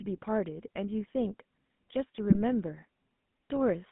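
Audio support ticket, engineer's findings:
GSM full-rate codec, whole clip. Buzzy, gravelly speech band-limited to roughly 150 Hz to 3.6 kHz, consistent with 13 kbps full-rate coding. Vocal-tract model driven by sparse regular pulses, decimated excitation, hence plainly audible roughness.

GSM bit errors, 2.30 to 2.38 s. Brief squawk and gargle. Points to corrupted bits in a few decoded frames: damaged filter, pitch or gain parameters distorting the spectrum and level for each hit frame.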